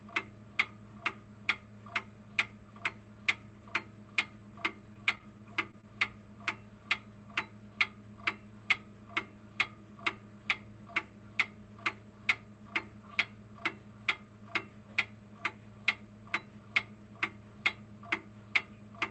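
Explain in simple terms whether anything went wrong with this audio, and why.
Between 4.93 and 5.85 s the sound turns choppy and robotic: repeated packet loss. Seven tiny holes, none longer than 19 ms, were each patched by stretching the sound just before them. Unlike one clean dropout, this gives rapid stuttering.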